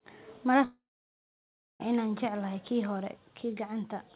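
From 0.64 s to 1.82 s, the network likely stopped delivering packets for over a second: a long network dropout. The receiver bridges the gap by stretching the last sound into a brief fading buzz, and then about 0.99 s of near-silence remains. The audio returns at "inaan jecelahay kii hore" with roughly 1.16 s simply gone. Through the telephone-band call path, which carries nothing above 4 kHz, the resumed speech keeps the same narrow, muffled quality.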